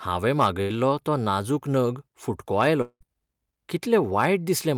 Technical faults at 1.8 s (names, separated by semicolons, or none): none